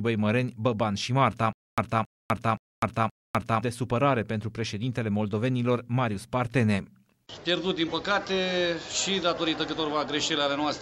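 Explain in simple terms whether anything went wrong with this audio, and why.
Something went wrong from 1.53 to 3.62 s. A short burst of sound, about 0.27 s long, plays four times. Each repeat is followed by a quarter second of dead silence. This is stutter with silent gaps. The likely cause is playback stalling, and the sound from that stretch is lost.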